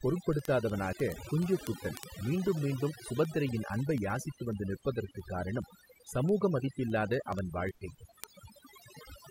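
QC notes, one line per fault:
throughout: overdone noise removal, with bands near the noise floor pushed right down, so the background breaks up into twinkling, warbling specks; spectrogram shows patchy holes and scattered twinkling dots.
0.15–9.27 s: word clock ticks roughly every 0.07 s, about 150 in all, fitting unlocked clocks a few hundred ppm apart slipping a sample each time; waveform shows regular spikes.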